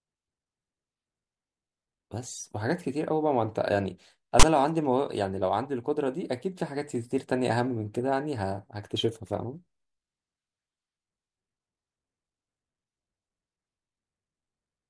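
At 4.40 to 4.43 s the speech is broken by file tags played as audio, with a stretch of text metadata read as if it were samples. The result is a 33 ms hard-edged rasp offset to one side, unlike a centred full-scale white-noise burst from compressed data.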